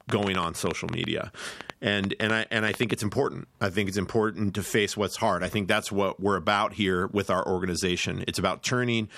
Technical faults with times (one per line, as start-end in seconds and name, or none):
0.10-2.92 train of clicks